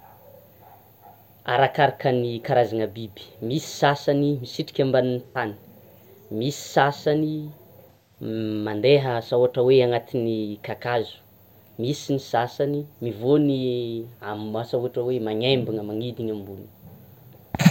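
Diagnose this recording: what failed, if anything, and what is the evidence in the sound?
The codec stage failed, with AAC frame loss and concealment. From 5.23 to 5.36 s and from 7.88 to 8.18 s, just before "mandeha asa ohatra", the speech turns into a smeared, noisy or phasey patch rather than going silent or clicking. The decoder rebuilt the missing 85 and 171 ms (roughly two and four frames) from the last good spectrum.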